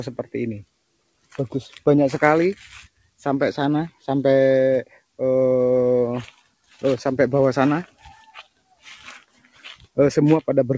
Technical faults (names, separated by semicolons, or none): sound cut by the noise suppressor